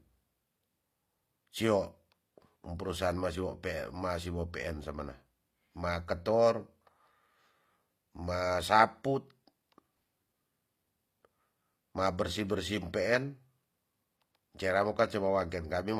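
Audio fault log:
Throughout, HE-AAC compression: the treble sounds synthetic and gritty, with lispy s sounds, likely from band replication at a low bitrate near 24 kbps; the spectrogram shows copied, blocky upper bands.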